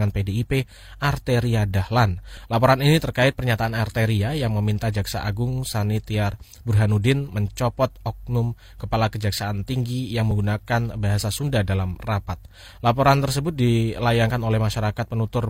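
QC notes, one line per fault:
6.34–6.37 s and 10.31–10.35 s, overlap between stream segments: at each point about 30 ms and then about 40 ms of sound is missing, so the waveform jumps straight ahead and a small click or skip is heard. Where two segments' time stamps overlap, the player trims material that was never actually doubled. Unlike a dropout, no silence is inserted, and unlike an untrimmed overlap, nothing repeats. The spacing of about 4 s between the two events fits 2-second segment boundaries.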